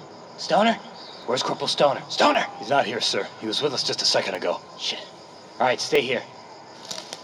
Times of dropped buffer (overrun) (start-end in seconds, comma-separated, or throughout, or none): 1.23, 2.35, 4.35, 5.95